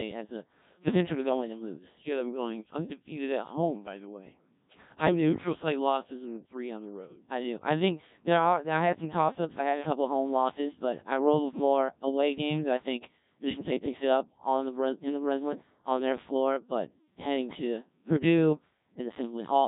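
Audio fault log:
throughout: Codec 2 vocoder. The speech sounds robotic and buzzy. The coder keeps only pitch, voicing, energy and a rough spectral envelope, then rebuilds the voice from sine waves at the decoder. The original waveform is gone, so breath and texture turn synthetic. Damage is heavy, which fits a very low rate around 1.3 kbit/s. Nothing is left above 3.8 kHz, so the top end sounds dull and boxed in.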